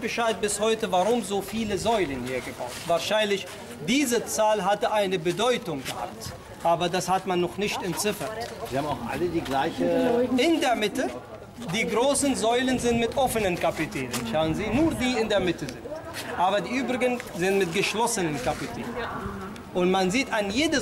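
Nothing technical stands out here; the audio runs along without any glitch, dropout or distortion worth flagging.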